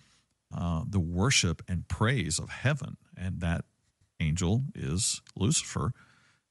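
Bluetooth LC3 compression is the likely cause of the plainly audible grainy, breathy edge that runs throughout this speech recording, from start to finish. LC3, the transform codec used by Bluetooth LE Audio, codes the signal in short frames (here consistent with 10 ms) and spends its bits sparingly. The quantisation noise and noise-filled detail it leaves behind sit over the speech as a rough, hissy texture, which fits a rate of around 48 kbps.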